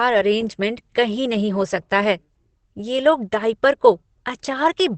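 Opus compression runs throughout: the speech sounds muffled and hoarse, with nothing above 8.7 kHz, likely from Opus speech mode at about 16 kbps.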